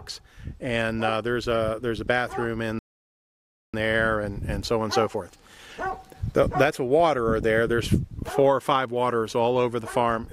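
The audio cuts to silence for about 0.95 s in a playback stall from 2.79 to 3.74 s, likely because the player ran out of buffered data or its thread was blocked. From 3.74 to 6.74 s, time-compressed catch-up plays the audio about 1.15 times faster at unchanged pitch, as the player trims and cross-fades small segments to work off its backlog.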